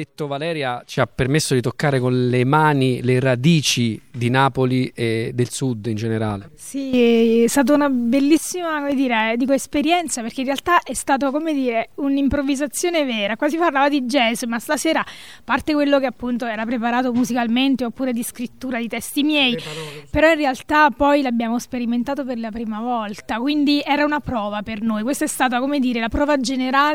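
From 8.35 to 9.77 s there are CD scratch ticks: six short clicks spaced evenly at roughly four per second, each lasting under two milliseconds. A surface blemish on the disc damages more data than the error correction can rebuild, and because the damage comes back on each turn of the disc the ticks repeat at a steady rate. On a waveform they appear as tiny, evenly spaced glitches, and on a spectrogram as thin vertical lines.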